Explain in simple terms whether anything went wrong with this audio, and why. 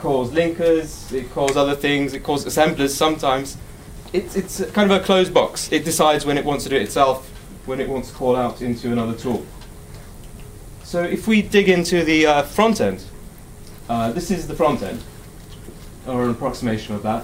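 There's one fault: a sharp little snap at 2.14 s, an electrical switching spike. It's most likely a nearby switch or static discharge arcing briefly and leaking into the audio line.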